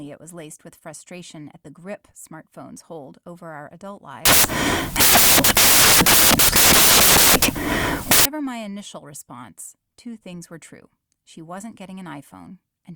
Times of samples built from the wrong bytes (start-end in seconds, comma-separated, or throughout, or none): 4.25-8.25